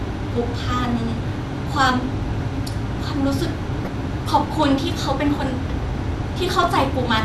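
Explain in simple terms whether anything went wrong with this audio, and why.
The speech sounds dull and gurgly throughout, with a grainy edge on the voice. That points to MP2 compression, likely squeezed too hard: the upper frequency bands drop out and flicker, and what remains is stored roughly, as on low-rate digital radio.

Two short glitches break in, from 3.79 to 3.87 s and from 6.63 to 6.67 s. This is DAB burbling: reception errors slipped past the error correction and corrupted the compressed audio, putting short blips of noise into narrow frequency bands.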